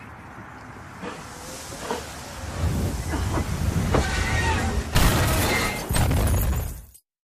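No technical faults can be heard anywhere in this audio.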